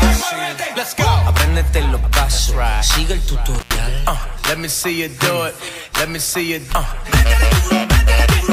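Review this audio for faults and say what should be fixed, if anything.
An intermittent contact at 3.55 to 3.76 s opens the line for about 112 ms, with crackle at both edges, unlike a clean digital dropout. Reseat or replace the cable and plug, and secure connectors against movement.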